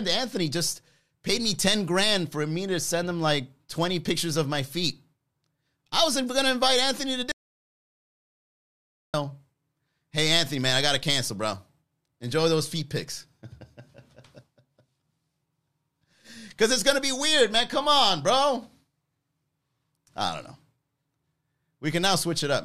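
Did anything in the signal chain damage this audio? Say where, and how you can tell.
Yes. An audio dropout to silence runs from 7.32 to 9.14 s: the speech cuts off mid-flow and about 1.8 s is silent, with no room tone. That points to lost input upstream of the recorder, likely a link or device interruption, rather than gating or fading.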